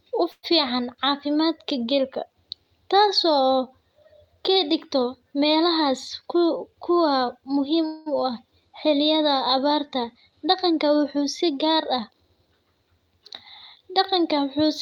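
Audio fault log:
0.31–0.45 s: call audio freeze, likely from delayed packets draining the jitter buffer; about 115 ms of fill, a fading buzz or hiss ending in 50 ms of silence, nothing lost.
5.89–7.78 s: jitter buffer speed-up, short pitch-period pieces removed repeatedly, roughly 100 ms in all, so speech runs 6% faster at unchanged pitch.
7.86–8.08 s: call audio freeze, likely a late-packet stall; the last sound is stretched into a fading fill for about 204 ms, then speech resumes where it stopped.
12.23–12.76 s: jitter buffer speed-up, roughly 70 ms trimmed in pitch-period slices, giving a hurried 13% faster pace with pitch held steady.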